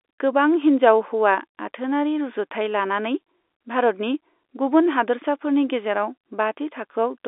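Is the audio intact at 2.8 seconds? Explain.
Yes, at 2.8 seconds the audio is intact, with the speech coming through the G.711 telephone coding as expected for a phone line, band-limited to roughly 300 Hz to 3.6 kHz.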